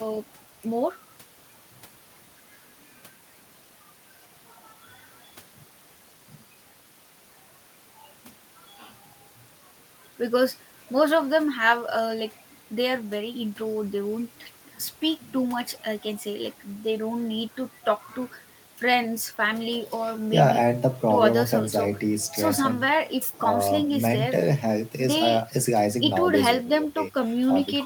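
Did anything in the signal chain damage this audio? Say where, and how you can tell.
No, nothing in the signal chain audibly damaged this speech recording. There's no sign of trouble at any stage, from the wiring through to playback.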